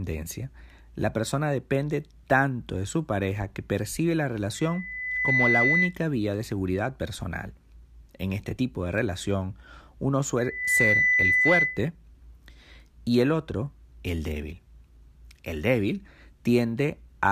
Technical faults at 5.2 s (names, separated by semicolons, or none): loudspeaker feedback squeal